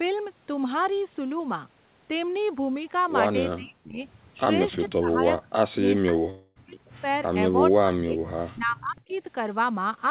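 From 3.56 to 4.07 s the talker's level sinks by as much as about 40 dB. This is speech suppressed in double talk, likely because an echo canceller muted its own talker while the far side spoke. The sound is ducked and shrunken rather than replaced, which separates it from a dropout.

The same suppression returns in a longer stretch from 4.87 to 7.05 s, with the voice turned down for about one and a half seconds in all.

Inside that stretch, from 6.30 to 6.58 s, a long network dropout takes out about 260 ms, likely from packets that never arrived. The gap is not a clean dip. The last sound carries on as a decaying buzz or hiss for about 256 ms before a brief silence, and the speech resumes without the lost part.

At 6.71 to 6.77 s a faint echo leak appears, likely from loudspeaker echo a canceller failed to remove. It is a delayed copy trailing the voice by 423 ms at roughly 35 dB below it. 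That makes it a real repeat of earlier sound, not the smeared fill of a dropout.

Double-talk suppression strikes again from 7.71 to 8.20 s, dipping by about 30 dB. It returns once more from 8.53 to 9.18 s, reaching about 40 dB down.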